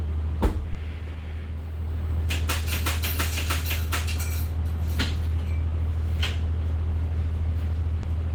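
Clock drift between sender and receiver runs through the whole recording of everyday sound. The sender's clock is about 2 percent slower than the receiver's, so the jitter buffer keeps draining. Unlike a single network delay, this mismatch is constant and forces the repeated fixes described next.

From 0.06 to 6.22 s there are repeated timing corrections. The receiver keeps padding out short pieces to keep pace, playing this stretch at 98 percent speed and adding roughly 150 ms in total. They are heard as a faintly dragging, uneven tempo with small hiccups rather than a single obvious break.

At 0.73 to 0.77 s, and again at 8.01 to 8.05 s, there is a short stall from a late packet. Each time a packet arrived late, the buffer ran empty, and the receiver held the last sound for 20 ms before continuing with nothing lost. This is heard as a brief smeared hold with a slight buzz or dip, not a gap or a skip.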